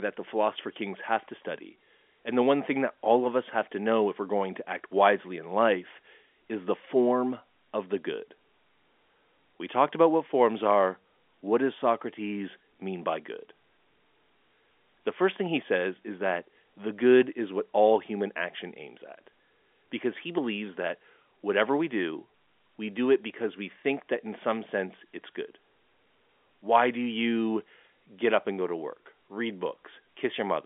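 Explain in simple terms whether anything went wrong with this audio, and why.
Nothing went wrong with this audio; it simply has the narrower, muffled-top sound of an ordinary landline phone call, which is normal for that kind of line.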